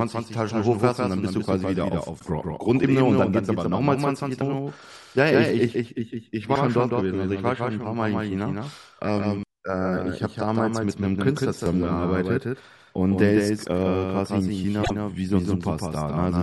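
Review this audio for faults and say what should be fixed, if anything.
A doubled audio track runs through the whole speech clip: a full-band copy about 5 dB quieter trails roughly 150 ms behind, with no decay. On a spectrogram every syllable has an identical twin about 0.15 s later. The likely cause is a second, slower capture path mixed in, so disable or mute the duplicate input route.

Repeated frames cause stutters at 2.18–2.24 s, where a 52.2 ms two-frame block plays once more, and at 14.83–14.91 s, where one 26.1 ms frame plays twice more. Each adds 52.2 ms. On the waveform, identical segments sit side by side. Fix the writer or transport so frames aren't resent or duplicated.

Dropped buffers cause an abrupt jump in the sound. About a tenth of a second is lost at 2.84, 6.55 and 11.66 s, and about 0.3 s at 4.42 and 9.43 s. The waveform shows a sudden discontinuity with no gap, and the spectrogram shows a thin vertical line. 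The likely cause is input overrun, so enlarge buffers or raise the capture thread's priority.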